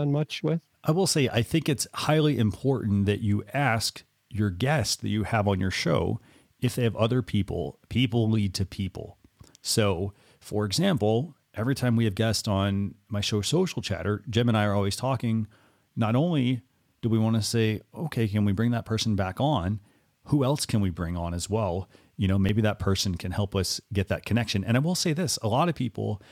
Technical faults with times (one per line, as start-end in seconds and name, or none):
6.42 dropped buffer (overrun)
22.49 dropped buffer (overrun)